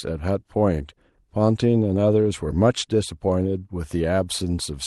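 No technical faults are audible.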